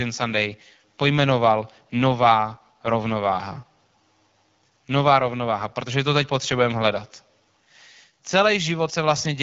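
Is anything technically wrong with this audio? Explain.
Yes. The whole clip carries AMR wideband (HD Voice) codec damage, and it is plainly audible. The codec models speech up to 6.4 kHz as pulses driving a vocal tract filter. Above that it substitutes shaped noise. Nothing is present above about 7.4 kHz. The speech sounds rough and raspy throughout. That harshness points to one of the lowest AMR-WB rates, around 8.85 kbit/s, where too few bits remain to model the voice cleanly.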